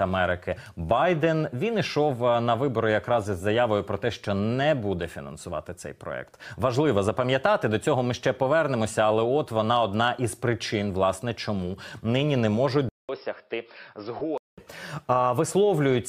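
At 12.89 s a short silence of about 200 ms is followed by audio that turns dull and boxy, with nothing above 5.4 kHz, a level a few dB lower and a different, faint noise floor. It clears again at 14.58 s. The likely cause is the input switching to a poorer device. The new noise and level, not just lost treble, set it apart from a simple low-pass filter.

Inside that stretch, at 14.2 s, lost LE Audio frames leave a brief noisy smear about 15 ms long, which fits a couple of missing frames. The LC3 decoder refilled the gap from the last spectrum with scrambled signs, so the sound blurs instead of dropping to silence.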